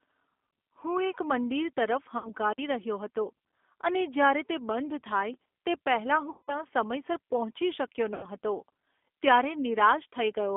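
Throughout, the speech has passed through a G.729 codec, which rebuilds each 10 ms frame from a vocal tract filter, a pitch predictor and a handful of pulses rather than sending the waveform itself. The line is held to roughly 250 Hz to 3.5 kHz, which fits an 8 kbit/s G.729A stream, so the speech sounds thin and narrowband, and the coding damage is plainly audible as a rough, slightly synthetic texture.

At 2.18 s, VoIP packet loss concealed by the speech codec begins. About 60 ms of audio, consistent with two lost packets, never arrived. The decoder kept extending its last pitch and filter while fading the gain, so the sound smears into a buzzy tone or coloured noise that dies away and doesn't fully recover until about 2.31 s.

At 5.34 s comes a block of digital silence. Roughly 5 ms of audio dropped out with no fade in or out, and the abrupt drop and return produce a tick or dip.

The longest concealment runs from 6.30 to 6.64 s. 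About 180 ms was lost, which points to six packets, and the extrapolated sound decays audibly before the decoder's state rebuilds. A further loss of about 90 ms, suggesting three packets, is concealed from 8.14 to 8.27 s. It gives the same stretched, fading sound and leaves the speech weak just after.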